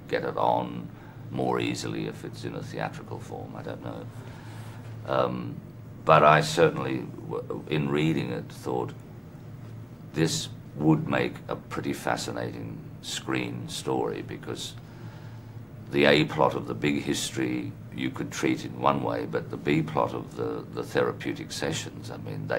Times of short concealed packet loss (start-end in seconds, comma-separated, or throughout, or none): none